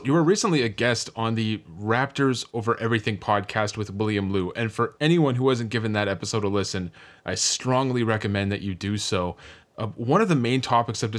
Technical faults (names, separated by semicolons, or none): none